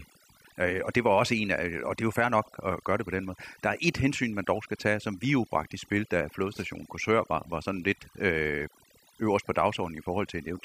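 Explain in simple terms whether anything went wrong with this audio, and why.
From start to finish, the pauses drop to near silence with twinkling specks. That is overdone noise removal: a noise reduction tool set too strong cut away background noise along with quieter parts of the voice.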